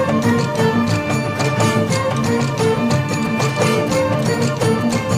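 From 3.25 to 4.92 s, GSM signalling bursts break in: a galloping dit-dit-dit of short 217 Hz buzzes, roughly 20 dB below the main sound. A nearby 2G phone's radio pulses are being rectified by the audio circuit. Mains hum differs by being continuous.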